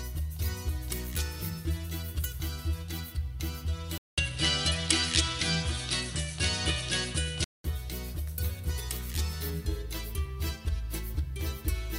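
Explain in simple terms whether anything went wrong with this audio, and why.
Input switched to a poorer device, 3.98 to 7.64 s: after a fifth-second gap the sound turns duller and changes in level, likely because a weaker microphone took over.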